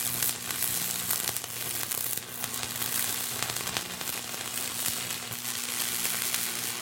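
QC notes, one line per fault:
2.80 s to the end, doubled audio track: from 2.80 s a second copy of the sound appears abruptly and runs to the end, trailing the original by about 200 ms and sitting roughly 5 dB lower. It is full-band, with no decay or room colour, so it reads as a hard slapback rather than an echo. The likely cause is the same signal reaching the mix twice, once through a slower path or a misaligned edit.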